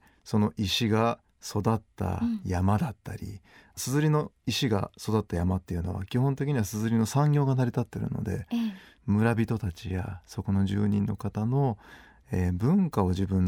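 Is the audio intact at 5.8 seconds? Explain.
Yes, at 5.8 seconds the speech runs through cleanly, with no dropout, click, distortion or other fault to be heard at that point.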